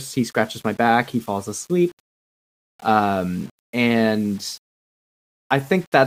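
Low bit depth without dither runs through the whole of this speech clip. The grainy distortion tracks the signal, roughening quiet passages, with error roughly 30 dB below the level, likely from rounding to about 7 bits with no dither to decorrelate it.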